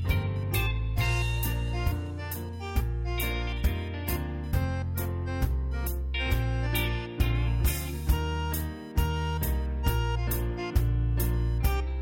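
Computer activity noise runs throughout, a faint buzz pulsing around 1 kHz, roughly 35 dB below the audio, as computer load changes disturb the shared ground.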